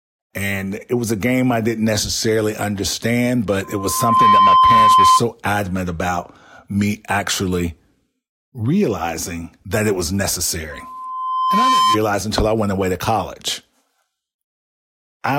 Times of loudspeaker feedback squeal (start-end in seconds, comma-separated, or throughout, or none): 3.63-5.22, 10.71-11.98